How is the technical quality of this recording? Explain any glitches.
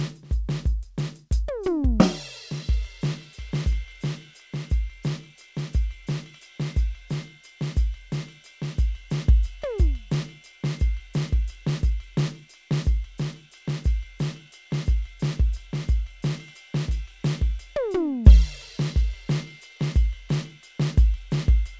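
The music has no audible faults, and its band stops at 8 kHz, as expected from a G.722 call path.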